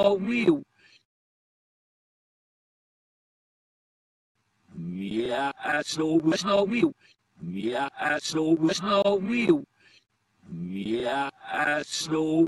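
From 5.44 to 8.80 s the audio suddenly rushes ahead at about 1.72 times its normal pace, sounding hurried while its pitch stays where it was, then drops back to normal speed. This is a time-stretched section, likely the work of software squeezing that stretch to fit a shorter length by cutting out short slices of sound and joining the remainder, which speeds it up without raising the pitch.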